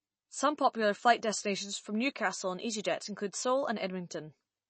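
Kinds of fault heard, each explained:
MP3 compression: The speech sounds dull and plainly processed, with nothing above about 8.3 kHz, so the crisp top of s and t sounds is missing. Weaker detail has a watery, swirling texture as it comes and goes. The likely cause is MP3 encoding at a low bitrate, which fits about 32 kbps. Short of bits, the encoder cut the treble at a fixed point and dropped quieter frequency components, which shifts from frame to frame.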